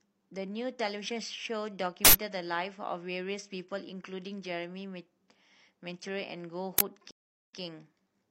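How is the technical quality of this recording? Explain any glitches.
The recording has clear technical problems: a constant roughness from clock jitter, two bursts of digital noise, and a dropout with a small jump back in the speech.

Sample clock jitter is present throughout. The converter's clock wobbles by under a microsecond, so each sample is captured a little early or late. Where the waveform changes quickly, that timing error becomes an amplitude error, roughly 25 dB below the signal. It sounds like a grainy hiss riding on the louder and brighter parts of the speech, and it disappears in the pauses.

Uninitialised buffer glitches occur at 2.05–2.13 s and at 6.78–6.81 s. In both cases a block of audio was sent to the output before anything had been written into it, so whatever was left in memory was played as samples. The first burst lasts about 85 ms, which fits a 4096-sample buffer. 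The second lasts about 21 ms, which fits a 1024-sample buffer. Each one is heard as a sudden, harsh blast of digital noise that cuts through the speech.

A stream reconnect runs from 7.11 s to 7.58 s. The connection dropped, playback fell silent for 382 ms, and the player then reconnected and restarted its decoder partway through the stream. When the sound returns, it picks up 93 ms earlier than where it broke off. The result is a clear gap followed by a short stretch of repeated speech.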